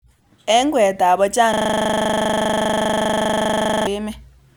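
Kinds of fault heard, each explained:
System hang loop: the computer or its audio driver stalled, and the sound hardware kept replaying the last filled stretch of its ring buffer instead of receiving new audio. Right after "kweet ab", from 1.54 s to 3.87 s, the speech freezes and a single 40 ms slice repeats 58 times, which fits a buffer of about 40 ms. Cycling at 25 Hz, it comes across as a harsh, rattling buzz, not recognisable speech.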